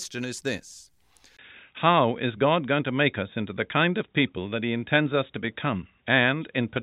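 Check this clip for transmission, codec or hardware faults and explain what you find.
One fault is present in the speech. Input switched to a poorer device from 1.37 s onward: likely a change to another microphone. After a 20 ms gap, everything above 3.8 kHz vanishes, leaving the sound dull and boxy, about 5 dB different in level, with a faint new noise floor.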